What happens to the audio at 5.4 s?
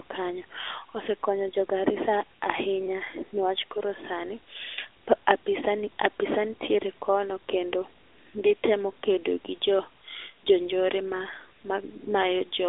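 At 5.4 s, as across the whole clip, the speech carries AMR narrowband mobile codec damage. Nothing passes above 3.7 kHz, and the line band sits between 200 Hz and 3.6 kHz. The codec rebuilds the voice from a vocal-tract model excited by a few pulses per subframe, so the speech sounds plainly buzzy and synthetic, as expected from a mid-rate mode near 10 kbps. That synthetic texture is what distinguishes it from simple telephone band-limiting, which only dulls the sound.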